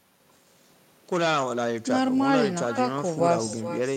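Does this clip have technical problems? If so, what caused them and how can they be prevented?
Yes. Throughout the speech there is echo with no canceller: every phrase returns as a distinct, quieter copy about 13 dB down, arriving roughly four tenths of a second later. The far end played the call through a loudspeaker, its microphone picked it up, and nothing subtracted it before sending it back. Unlike room reverberation, which smears into a smooth tail, this is a separate, delayed repeat. Enabling acoustic echo cancellation, or using headphones at the far end, prevents it.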